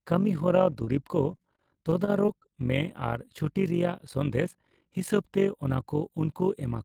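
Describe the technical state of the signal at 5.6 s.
Overlap-add ripple at 5.6 s, present throughout: frames rejoined with mismatched overlap make the level swing by about 11 dB around fifty times a second, a rough robotic flutter.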